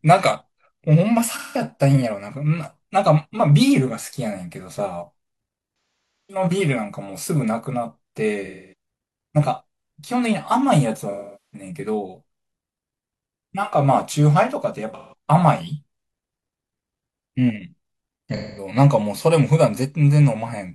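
There's AAC frame loss with concealment at 1.31, 5.95, 8.46, 11.11, 14.94 and 18.36 s, lasting roughly 0.17 to 0.51 s each. The decoder papers over missing frames by reusing the last good spectrum, so you get smeared, noisy, phasey patches, thinning most in the longest gap at 5.95 s.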